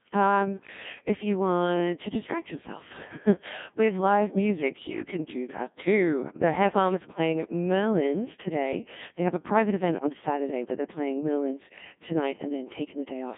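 Speech run through the Codec 2 vocoder throughout, with heavy damage: the voice is rebuilt from sine waves using only pitch, voicing, energy and a coarse spectral envelope, giving a robotic, buzzy tone that points to roughly 1.6 kbit/s. A spectrogram shows synthetic harmonic stripes confined to 150 Hz to 3.6 kHz, with nothing above 3.7 kHz.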